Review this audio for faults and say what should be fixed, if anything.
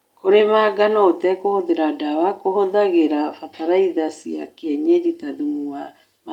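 Nothing in this speech recording needs fixing, as no technical faults can be heard at any point. No repair or prevention step is called for.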